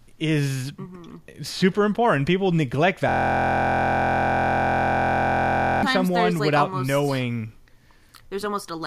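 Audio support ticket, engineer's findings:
System hang loop, 3.09 to 5.83 s, ending just before "someone like". Driver or host froze while the audio device kept replaying its ring buffer. One 23.2 ms slice of speech repeats well over a hundred times, heard as a steady buzz at about 43 Hz, which fits a 1024-sample buffer. Roughly three seconds of real audio lost.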